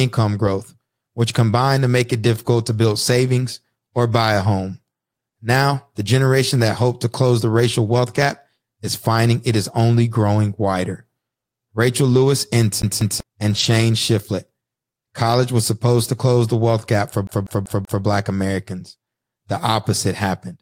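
At 12.09 to 12.23 s, a stretch of about 80 ms turns grainy and noisy without ever dropping out. This is a lost packet rebuilt from error correction: the missing packets, which fits about four 20 ms frames, were replaced by the low-bitrate copies carried in the following packets. The speech stays continuous. That rules out ordinary packet-loss concealment, which would smear or repeat the last sound into the gap rather than roughen it.

From 12.82 to 13.20 s comes a CD stuck on one turn. A scratch makes the player jump back to the same spot, so a 192.52 ms slice plays twice, with a brief mute at each jump. The fixed, fast period and those tiny silences set it apart from a buffer repeat, which loops without the clicky muting.

At 13.51 to 13.69 s there is another error-correction rebuild, about 100 ms long and again rough but gapless, consistent with roughly five lost packets.

Right after "the wealth gap for", from 17.27 to 18.04 s, the same 192.52 ms skip returns. 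The slice repeats four times in an even stutter, with a short mute at every jump.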